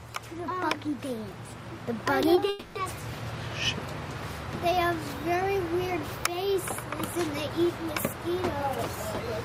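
At about 2.35 to 2.39 s there's a short concealed packet loss. Roughly 20 ms of audio didn't turn up at the decoder in time, so the receiver patched the gap by carrying the last bit of sound forward and then blending back into the real signal. You hear it as a tiny smear or wobble, and whatever was in that sliver is simply gone.

Then from about 2.49 to 2.77 s the audio turns into a drawn-out synthetic continuation, a buzzy, hissy extension of the preceding sound that hangs on for about 260 ms with no actual silence in it. That's most likely a long network dropout. Nothing arrived for that stretch, so the concealment kept extrapolating the last sound the whole way through instead of playing real content. When the signal picks up again, the missing quarter-second never comes back.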